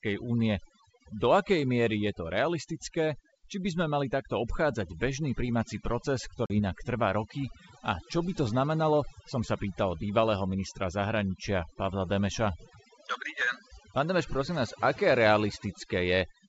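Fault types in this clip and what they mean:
Overdone noise removal: A noise reducer set too strong pulls single frequency bands down whenever they sit near its noise estimate. Throughout, this leaves near-silent pauses dotted with twinkling specks. Unlike steady codec hiss, these artefacts flicker and shift with level.
Packet loss on an ADPCM call: From 6.46 to 6.60 s, a hard-edged hole of about 40 ms, fitting roughly two lost packets, interrupts the speech. The decoder's predictor and step size then disagree with the sender's, so brief distortion follows before it settles.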